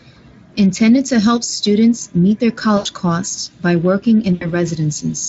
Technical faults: VoIP packet loss concealed by the speech codec

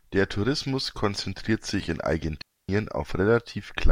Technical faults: digital wireless dropout

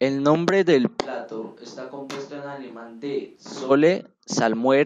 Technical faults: switch to a distant microphone

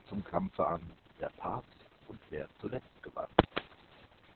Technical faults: Opus voice compression

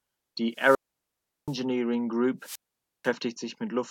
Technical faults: wireless microphone squelch dropout

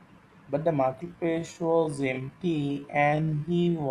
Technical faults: time-stretched section

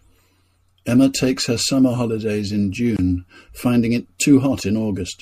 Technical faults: MP3 compression; gap at a join of encoded pieces

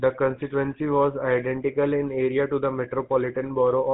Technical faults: GSM full-rate codec

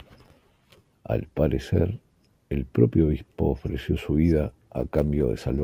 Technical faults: crude rate conversion

